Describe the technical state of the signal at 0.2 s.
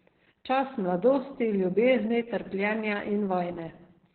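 At 0.2 s the speech carries Opus voice compression, present throughout the clip. The codec is running its SILK linear-prediction coder in narrowband, so nothing sounds above about 4.3 kHz, and the excitation is coded coarsely, which fits a bitrate around 8 kbps. The result is muffled, hoarse and slightly robotic. Unlike a plain low-pass filter, which only dulls the top end, this adds a rough, synthetic grain to the voice itself.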